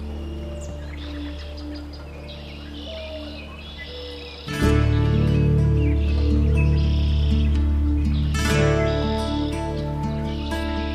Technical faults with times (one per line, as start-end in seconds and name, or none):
none